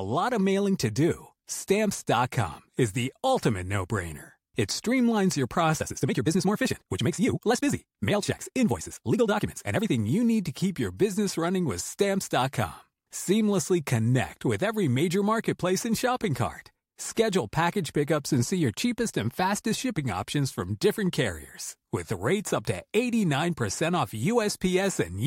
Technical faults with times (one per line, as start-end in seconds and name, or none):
5.76-9.92 time-stretched section